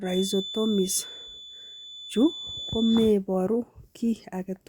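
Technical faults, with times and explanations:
0.00 to 3.16 s, feedback whistle: a thin, steady 3.5 kHz tone sits behind the speech, roughly 15 dB below it and swelling and fading slowly in level. The likely cause is a loudspeaker-to-microphone loop poised at the edge of feedback, sustaining that single frequency without running away.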